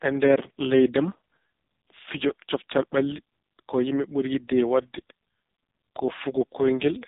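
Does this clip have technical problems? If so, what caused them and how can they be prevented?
Yes: the speech runs through an AMR narrowband mobile codec the whole way, with nothing above 3.8 kHz and a heavily buzzy, synthetic tone that fits its lowest 4.75 kbps mode. To prevent it, record or route the call over a wideband or higher-bitrate path instead of narrowband mobile coding.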